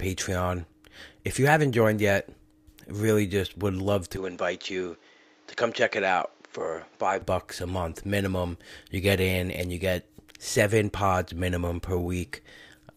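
From 4.17 s to 7.22 s, after "really just would love", the input likely switched to a poorer device. Everything above 7.6 kHz vanishes, so the speech turns duller, about 5 dB quieter and faintly noisier, with no gap at the changeover, until "bucks a month minimum".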